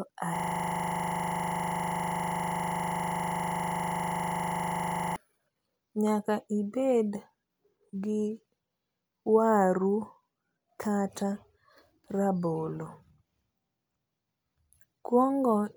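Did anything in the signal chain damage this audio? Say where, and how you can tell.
Yes. The damage is at the driver or buffer stage: a system hang loop from 0.36 s to 5.16 s. The host stalled while the audio hardware kept replaying the same 40 ms ring buffer, about 120 times over, so the speech is replaced by a steady 25 Hz buzz. On a waveform, that stretch is one identical 40 ms segment tiled end to end. A spectrogram shows the same slice repeating every 40 ms, with energy collapsing into harmonics spaced 25 Hz apart.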